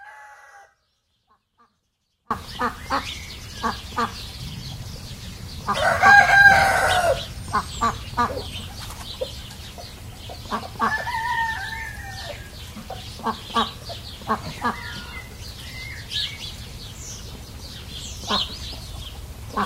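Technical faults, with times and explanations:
0.00–2.31 s, audio dropout to a faint residue: The clip opens already inside the dropout. Only a faint leak of the sound is heard, roughly 35 dB below normal level. Full level returns abruptly at 2.31 s. The signal was likely lost upstream while the path after the break stayed live.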